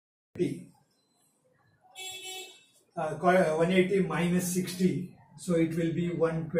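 A cut-off start at 0.35 s: capture began late, so the sound jumps from silence straight into the middle of an event, with no natural attack or fade-in.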